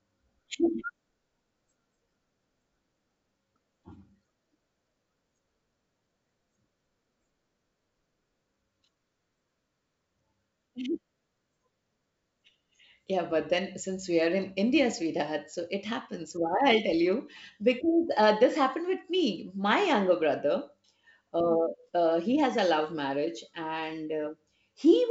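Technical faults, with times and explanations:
No technical faults can be heard in the speech. The G.722 wideband telephone coding at 64 kbit/s is audible as a band limit, with nothing above 7.7 kHz and at most faint coding traces.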